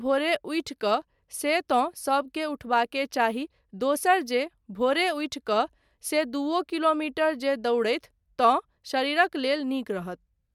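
Nothing in this speech recording stood out as a technical fault on listening.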